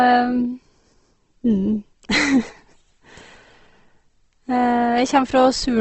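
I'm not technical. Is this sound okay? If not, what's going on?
No. The speech was most likely squeezed hard by Opus compression, which saves space by rebuilding fine detail instead of storing it. Throughout, everything above about 8.2 kHz is gone, so the voice sounds dull and plainly grainy and rough.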